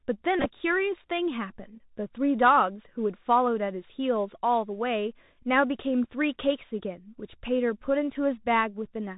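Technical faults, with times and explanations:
Throughout: Bluetooth CVSD headset codec. The speech has passed through the narrowband CVSD link used by headsets, which fits a 64 kbit/s one-bit stream that only tracks whether the waveform rises or falls. The damage is plainly audible. Nothing survives above 4 kHz, so a spectrogram shows a hard ceiling there. Sibilants turn scratchy where loud high content outruns the adaptive step, and a fine granular hiss lies under the speech.
0.39–0.45 s and 6.04–6.07 s: Bluetooth headset packet repeated. In both spots lost headset packets were replaced by decoding the previous packet's bits again. The first spans about 60 ms with roughly 41 ms of it repeated. The second spans about 30 ms with 15 ms repeated. The longest unbroken runs are only around 10 ms and 7 ms, so these sound like brief buzzy roughness rather than a sustained tone. A waveform shows short stretches of identical repeating cycles, and a spectrogram shows harmonic striping near 267 Hz.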